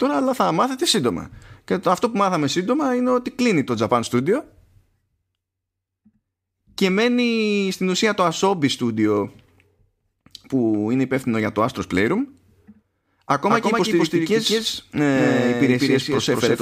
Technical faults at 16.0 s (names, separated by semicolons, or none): doubled audio track